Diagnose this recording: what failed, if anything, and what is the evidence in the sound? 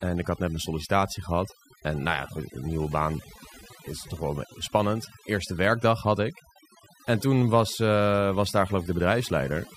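The fault is overdone noise removal at the processing stage, audible across the whole speech clip. The suppressor was pushed so hard that any frequency band sitting close to its noise estimate gets cut deep or gated off. The background collapses into near silence dotted with twinkling specks, and the softer parts of the voice are stripped out too. A spectrogram would show isolated musical-noise dots scattered through the gaps and a ragged, hollowed-out voice texture.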